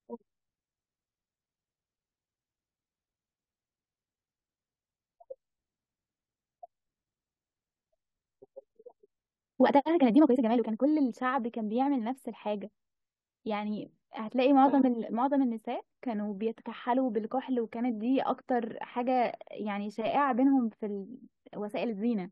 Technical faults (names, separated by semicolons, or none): time-stretched section